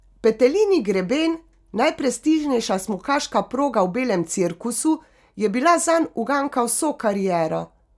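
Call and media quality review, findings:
No faults found in the speech clip. No action required for this ticket.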